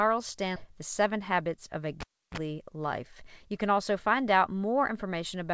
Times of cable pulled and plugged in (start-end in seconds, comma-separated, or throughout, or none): 2.00-2.37